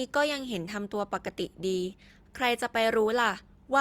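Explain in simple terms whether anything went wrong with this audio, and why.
Nothing went wrong here: the speech comes through with no audible faults anywhere in the recording.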